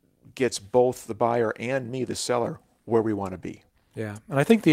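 Nothing in this short speech recording stood out as a technical problem on listening.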